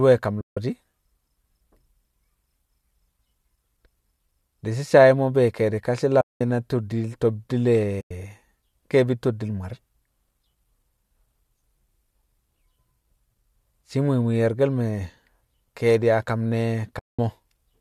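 Four short dropouts of the AAC frame loss with muting kind occur in this speech, at 0.41 to 0.57 s, 6.21 to 6.41 s, 8.01 to 8.11 s and 16.99 to 17.19 s, losing roughly 160, 200, 100 and 200 ms of audio. At each, whole blocks of coded data never arrived and the decoder replaced them with silence. The overlapping windows of the low-delay codec, likely AAC-ELD at about 64 kbps, taper the sound out and back in, so each gap is a soft-edged hole.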